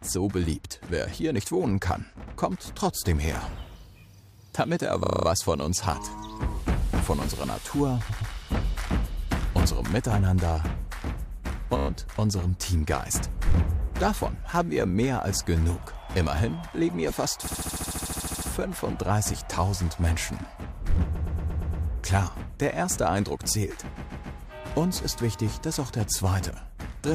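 Repeated frames at 5.04, 8.09, 11.77, 17.46, 21.14 and 23.95 s: a short block of compressed audio, between 15 and 139 ms long, is decoded again and again, stretching each spot by 0.1 to 1.0 s. It sounds like a stutter.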